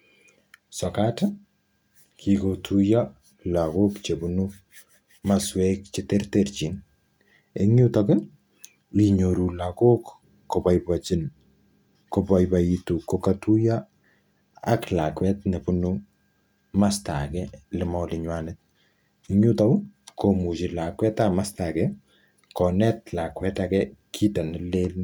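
No technical faults detected.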